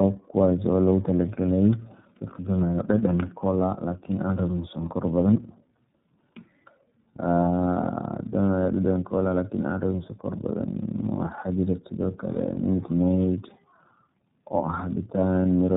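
Throughout, the speech shows tandem speech coding: it has been decoded and re-encoded by two low-rate speech codecs in succession, consistent with an AMR-NB stage followed by iLBC. The second coder compounds the first's errors, leaving the voice rough, muffled and warbly, with nothing above 3.8 kHz.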